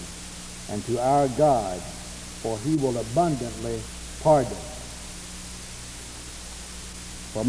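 No technical faults can be heard anywhere in the audio.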